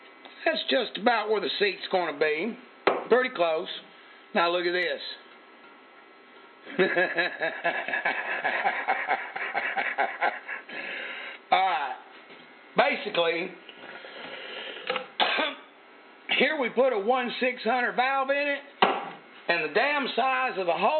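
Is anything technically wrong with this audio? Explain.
Yes. At 4.83 s there is a dropped buffer (overrun): the audio skips forward by a few milliseconds, roughly 5 ms, with no gap of silence. The material on either side of the missing piece is butted directly together, so the waveform jumps discontinuously at that point. The likely cause is that the capture software failed to read a buffer before the hardware overwrote it, so that slice of sound was lost rather than delayed.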